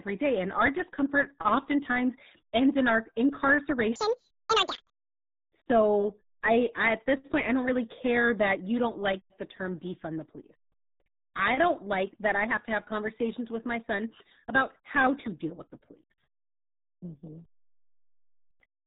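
Section at the wrong speed, from 3.96 to 4.94 s, in this speech recording: that stretch runs 1.92 times too fast, so pitch and tempo jump together by about ten semitones and the voice turns high and rushed, likely from playback or editing against the wrong clock. RealAudio 14.4 codec damage runs throughout. Nothing above 4 kHz survives, leaving the voice muffled and gargly with heavy coding damage, which fits an 8 kbit/s dial-up speech codec discarding most spectral detail.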